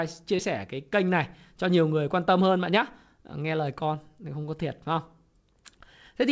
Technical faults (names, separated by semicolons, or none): short concealed packet loss